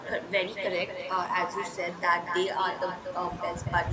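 The far end of the call has no working echo canceller: its loudspeaker plays the incoming speech, its microphone picks it up again, and that copy is sent straight back. The result is an echo with no canceller running through the whole clip. Every phrase is trailed by a copy about a fifth of a second later and about 8 dB quieter, sounding thinner than the direct speech, which is itself band-limited to nothing above 8 kHz by the call's microphone processing.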